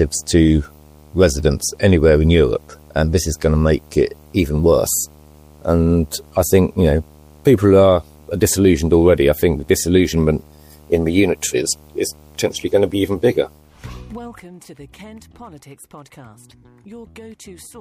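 From start to finish, a video or display buzz runs under the audio. A screen or video cable is coupling its field-rate signal into the audio path, giving a 75 Hz buzz topped with a fizzy hash, sitting roughly 30 dB below the wanted sound. On a spectrogram it shows as a steady horizontal line at 75 Hz with a ladder of harmonics and a haze above. The waveform carries a faint repeating ripple every 13.3 ms. The buzz persists through the whole clip.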